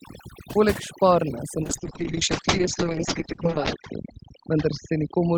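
Overdone noise removal runs from the start of the speech to the end. The noise reducer was set too aggressively, so each frequency band that sits close to its noise estimate is pulled far down or switched off entirely, and the quieter parts of the voice get removed along with the noise. The gaps between phrases fall to near silence dotted with twinkling specks.

From 1.64 s to the end, a call bitrate drop is layered on top. The call's bandwidth estimate collapsed and the encoder was pushed to spend far fewer bits, with the sound pointing to a fall from around 32 kbps to roughly 7 kbps. Opus codes more coarsely at that rate and narrows the audio band from 20 kHz down to an 8 kHz cut-off, so the speech turns muffled and rough, and stays at its worst for about 2.11 s.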